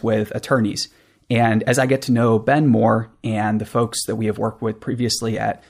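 Speech recording with no audible technical faults anywhere in the clip.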